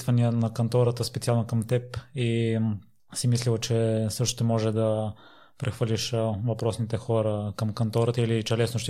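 Nothing technical stands out in this bit of speech; there's no fault to point to anywhere in it.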